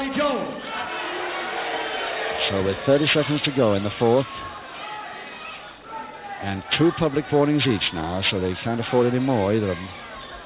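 Aliasing runs through the whole clip, which sounds as though it was brought down to a low sample rate, consistent with 8 kHz from 48 kHz, with no anti-alias filter first. Everything above the 4 kHz fold point mirrors back into the band as false, unrelated tones, sitting only around ten decibels under the real content, so bright sounds turn gritty and metallic. A spectrogram shows energy packed hard against the 4 kHz ceiling, with stray mirrored traces below it.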